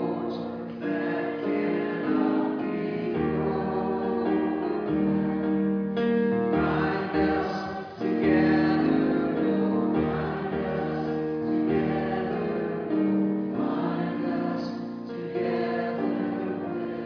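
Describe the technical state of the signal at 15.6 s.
At 15.6 s the signal is intact, with no audible dropout, distortion, glitch or other technical fault at that point.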